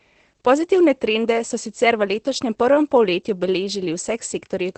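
Throughout the speech, Opus voice compression in SILK mode at a low bitrate, fitting about 12 kbps, drops everything above 8.6 kHz, leaving it muffled, hoarse and faintly robotic.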